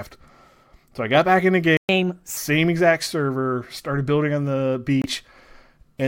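At 1.77 s, just after "got back in the", the speech cuts to silence for 120 ms before resuming. This is a playback stall, most likely the player running out of data.

From 1.89 to 2.37 s, leading into "exact server started building", the speech runs 1.25 times fast and about four semitones high. This is catch-up at higher speed, with the player resampling its backlog to recover the lost time.

From 5.02 to 5.06 s, after "started building on the", an abrupt 44 ms hole of silence appears, consistent with one lost frame. This is a corrupt frame muted: the decoder rejected damaged data and the player filled the gap with silence.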